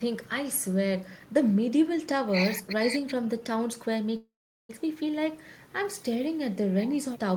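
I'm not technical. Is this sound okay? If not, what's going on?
No. At 4.16 s the speech stalls in a call audio freeze lasting about half a second, to 4.70 s. The last sound briefly carries on as a fading buzz, then falls silent for roughly 0.4 s. The likely cause is data held up in transit, so the receiving end ran out of audio to play. When it arrives, the speech resumes exactly where it stopped, about half a second late, with nothing lost.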